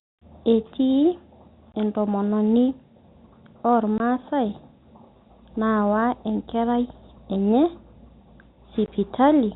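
A short hard-edged dropout chops the speech three times, at 1.72 to 1.74 s, 3.98 to 4.00 s and 8.86 to 8.88 s. This is packet loss filled with silence: each 20 ms gap, which fits a single lost packet, was replaced by silence on the telephone-band G.711 line.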